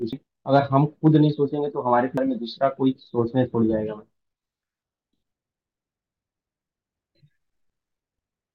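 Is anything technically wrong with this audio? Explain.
Yes. Damaged data in a compressed stream causes brief glitches at 0.13 s and 2.18 s and a longer one from 7.89 to 8.23 s. Corrupted frames make the decoder lose sync and search for the next frame header.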